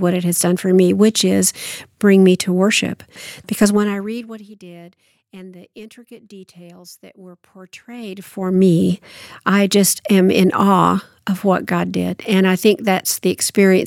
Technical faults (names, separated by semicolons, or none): zipper noise